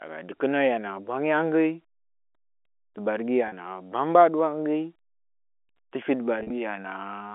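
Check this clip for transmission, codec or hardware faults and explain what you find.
Two brief packet losses with pitch repetition interrupt this telephone-band speech, which is carried by G.711 telephone coding with its usual 300 Hz to 3.4 kHz band. At 3.48 to 3.52 s, 40 ms of audio goes missing, which fits several short packets in a row. At 6.40 to 6.50 s, 70 ms is lost in scattered pieces over 100 ms, the longest run 40 ms. At both points the receiver fills each hole by looping the last pitch cycle, so the sound briefly holds with a faint buzz instead of falling silent. Unlike a plain dropout, no gap of silence opens.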